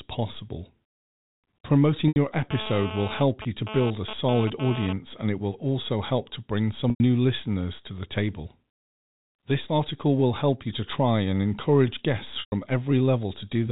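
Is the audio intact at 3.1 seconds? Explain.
No. From 2.51 to 4.93 s, just before "and it will also", GSM phone buzz intrudes. A nearby 2G phone's bursts, repeating at about 217 Hz, are rectified by the audio circuitry into a hard, raspy buzz about 10 dB below the speech, pulsing on and off as a data transfer would cause. A spectrogram shows evenly spaced harmonics of 217 Hz stacked up to the telephone band's 4 kHz ceiling. The waveform carries a regular pulse train.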